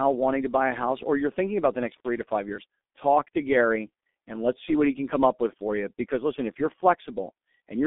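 From the start, the speech carries G.723.1 codec damage. It sounds muffled and hoarse, and consonants smear together. Nothing reaches above 3.8 kHz, and the band sits between 200 Hz and 3.6 kHz. The heavy coarseness fits a low bitrate near 6.3 kbit/s.

At 1.97 s an intermittent contact briefly breaks the signal path. The sound cuts out with crackle at both edges. The connection stays open for about 48 ms, and faint hiss fills the gap. The disturbance clears by 2.08 s.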